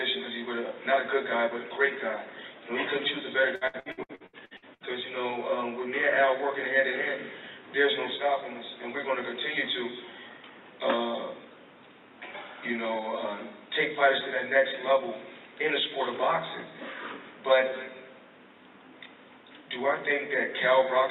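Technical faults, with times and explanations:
3.55 to 4.83 s, repeated packet loss (robotic sound): the audio drops out in rapid succession, roughly ten short holes, the longest about 68 ms. Each hole is bridged by stretching the last sound, covering nearly half this span. That repeated patching sounds choppy, with pieces missing.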